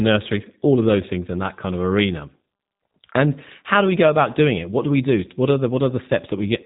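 Throughout, the speech carries G.729 codec damage: a rough, buzzy synthetic edge that fits 8 kbit/s coding, with nothing above 3.8 kHz, unlike clean band-limiting alone.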